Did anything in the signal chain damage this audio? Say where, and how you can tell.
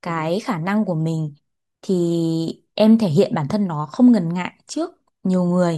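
No, no stage of the chain from capture through to playback has left an audible mark on this speech: the signal stays continuous and its level and tone hold steady throughout.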